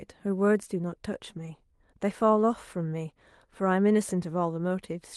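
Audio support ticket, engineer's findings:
Two packets lost on the Opus call path, each rebuilt by the decoder as a lost packet from error correction. The next packet's low-bitrate copy fills 20 ms at 1.37–1.39 s and 1.45–1.47 s. No gap, but both spots sound briefly rougher and noisier.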